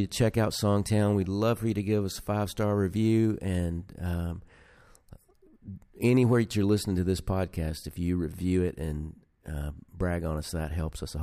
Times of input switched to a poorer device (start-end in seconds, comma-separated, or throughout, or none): none